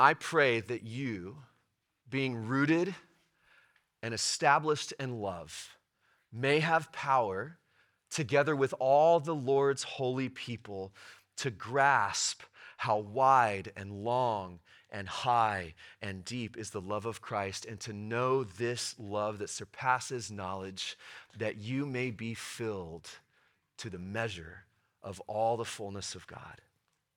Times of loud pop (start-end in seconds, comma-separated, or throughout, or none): none